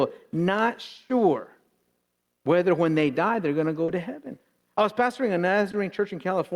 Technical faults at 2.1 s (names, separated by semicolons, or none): gain pumping